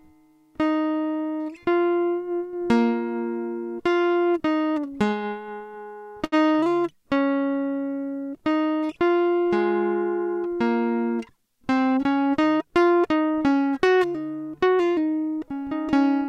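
From 4.67 to 6.34 s the music catches and hitches repeatedly, a run of thirteen brief hesitations where the last sound is held and smeared forward, the longest about 80 ms with a fade, before playback resumes. These are repeated stalls (stutter): packets arrived late or too slowly, so the jitter buffer kept running dry and the receiver stretched what it already had. Roughly 208 ms was filled this way, about 12% of that stretch, with nothing actually dropped.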